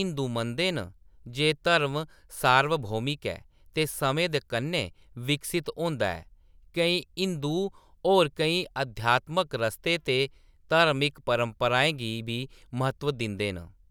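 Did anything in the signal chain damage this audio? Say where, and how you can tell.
No, nothing in the signal chain audibly damaged this speech recording. No stage, from capture to playback, left a mark that can be heard.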